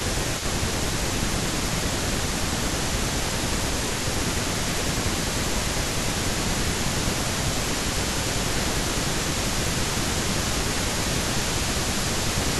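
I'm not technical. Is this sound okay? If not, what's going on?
No. Throughout the whole clip there is an echo leak: a fainter copy of the speech trails about 0.21 seconds behind the original. This is likely one caller's speakerphone sending its own loudspeaker sound back into the call because its echo canceller missed part of it.

There is also speech suppressed in double talk. The voice sinks from 0.04 to 3.41 seconds, 3.61 to 4.35, 4.85 to 6.85, 7.21 to 8.07, 8.6 to 9.62, and 10.35 to 12.6. The dips are deepest in the first and last stretches. The likely cause is that the echo canceller heard both sides talking at once and turned its own side's voice down along with the echo.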